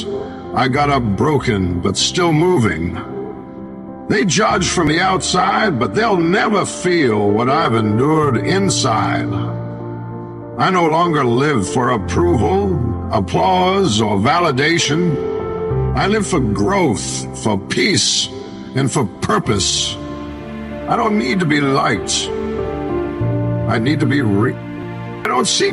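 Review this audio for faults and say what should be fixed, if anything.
Three brief skips land at 4.87 s, 14.85 s and 24.83 s, each a tiny jump where roughly 20 ms of sound vanishes and the two sides butt straight together without any gap of silence. Their even 10-second spacing points to audio missing between chunks, the likely cause being a recorder or processing stage that drops a sliver each time it closes one 10-second block and opens the next. To prevent it, fix the chunking so consecutive blocks are written back to back, using overlapping or double-buffered capture so no samples fall between them.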